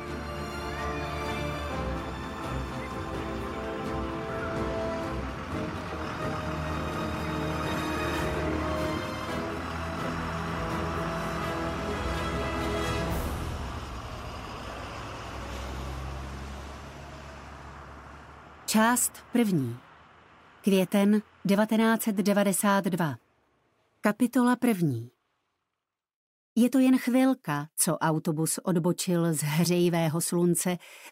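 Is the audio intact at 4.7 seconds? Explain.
Yes, the audio is intact at 4.7 seconds, with no fault present at that moment.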